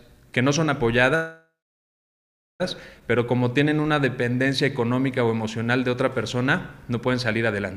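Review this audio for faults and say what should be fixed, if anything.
A call audio freeze runs from 1.15 to 2.62 s. The last sound carries on as a fading buzz or hiss, then about 1.1 s of silence, and the audio resumes where it stopped with nothing lost. Roughly 1.44 s is inserted, likely because delayed packets drained the jitter buffer. On a waveform it shows as a decaying tail followed by a flat line. On a spectrogram a smeared band fades into a blank gap.

A jitter buffer slow-down from 3.25 to 4.48 s repeats single pitch periods to rebuild the buffer's reserve. This adds 111 ms and plays at 92% speed with unchanged pitch, so sounds are drawn out. A spectrogram shows stretched harmonics with repeated, near-identical slices. The waveform shows cycles duplicated in runs.

A jitter buffer speed-up from 6.91 to 7.61 s trims short pitch-period pieces to reduce excess delay. Roughly 70 ms is removed and playback runs at 108% speed at the same pitch, sounding hurried. 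A spectrogram shows compressed features. The waveform shows cycles cut out at splice points.

To prevent these, stabilise the network path so packets arrive evenly, and give the jitter buffer enough target delay to absorb bursts and stalls without emptying or overfilling.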